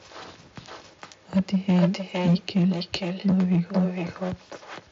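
From the start, the speech is shadowed by a second copy arriving about half a second later. It sits about 8 dB below the direct speech and sounds thinner. This is echo with no canceller. The far end's loudspeaker feeds its microphone, and nothing removes that path. The round trip through the network sets the delay. The echo runs through the whole clip.

Hard clipping comes in three bursts: 1.36 to 1.86 s, 2.26 to 2.66 s, and 3.28 to 3.85 s. In each, the level exceeds what a stage in the chain can pass, so the peaks are sliced flat. The first burst is overdriven by 7 dB, the other two by 5 dB. The flattened tops add high harmonics. Loud syllables distort, most strongly in the first burst. The bandwidth tops out near 8 kHz, as the mSBC headset link allows.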